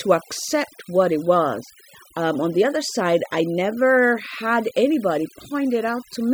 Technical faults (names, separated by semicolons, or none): overdone noise removal